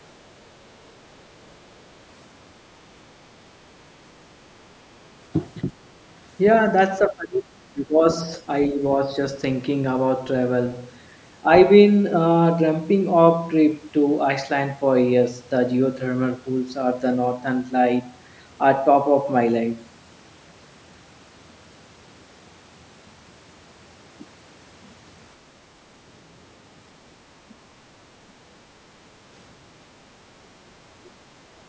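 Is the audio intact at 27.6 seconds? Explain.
No. From 27.55 to 27.72 s the speech sinks sharply, by around 20 dB, and sounds briefly choked off. This is likely speech suppressed in double talk: with both sides talking, the echo canceller mistook the talker for echo and turned it down.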